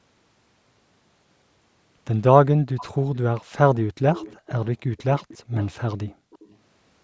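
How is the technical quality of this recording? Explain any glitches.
The quality suffers from far-end echo and one brief background dropout, both typical of a speakerphone call.

There's an echo leak at 2.77–2.85, 4.12–4.68, 4.97–5.03, 5.2–5.72, 6.09–6.15 and 6.31–6.56 s. A faint copy of the speech comes back about 0.35 s late, between roughly 15 and 30 dB below the main speech. The likely cause is a far-end echo canceller letting some loudspeaker pickup slip back into the call.

At 6.15–6.31 s the background is gated by the echo canceller. The room sound drops by up to about 40 dB for around 150 ms because the canceller clamped the microphone down hard while the loudspeaker played, then released it.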